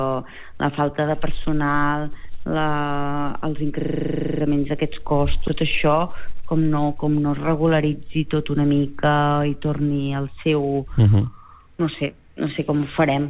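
From 3.8 to 4.4 s a system hang loop occurs: the host or driver stalled while the audio hardware kept replaying one 40 ms stretch of its ring buffer, about 15 times in a row. The exact repetition at 25 Hz comes across as a steady buzz in place of new sound.

At 5.48 s there is a skip ahead. Roughly 0.4 s of audio was discarded, most plausibly by an overfull jitter buffer, while later audio was already queued. Playback jumps straight across the hole with no gap, so the sound on either side is spliced almost directly together.

From 5.62 to 7.09 s the jitter buffer speeds up to drain the excess delay. It repeatedly cuts out short pieces one or a few pitch periods long, around 0.15 s in total, so the audio runs at about 110% speed. The pitch stays the same, but the passage sounds hurried. The band-limited character, with nothing above 4 kHz, fits a G.711 mu-law call path.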